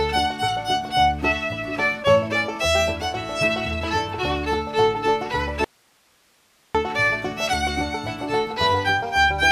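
At 5.64 s the sound cuts out abruptly and stays gone until 6.75 s, a gap of about 1.1 s. This is an audio dropout to a faint residue: instead of true silence, the gap holds a low hiss sitting somewhere around 40 dB below the normal signal level. The hard edges at both ends separate it from a natural pause or fade. The likely cause is a momentary loss of the source while the downstream path stayed live.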